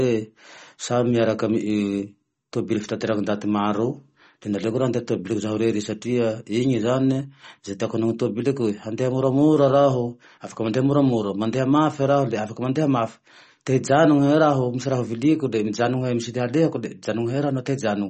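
A speech recording with plainly audible MP3 compression damage throughout, most likely from a low bitrate, which fits roughly 32 kbps. Nothing remains above 8.3 kHz, s sounds turn metallic, and weak frequency components drop in and out between frames, giving a watery, swirling texture.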